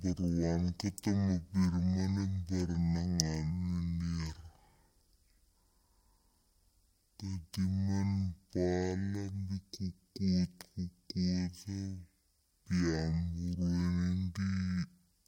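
Throughout the speech, stereo read as mono: interleaved left and right samples play as one channel, so everything runs at 0.5 speed, an octave low.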